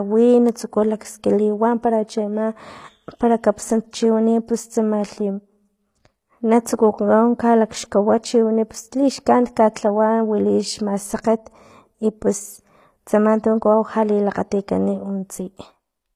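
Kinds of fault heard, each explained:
HE-AAC compression: The speech was likely squeezed through HE-AAC at a low bitrate, which fits something near 24 kbps. The encoder keeps only the lower spectrum and fakes the treble by copying lower bands upward under a coarse envelope. Across all 16 s the damage is plainly audible: the top end sounds synthetic, sibilants come out gritty and lispy, and nothing remains above 14.9 kHz.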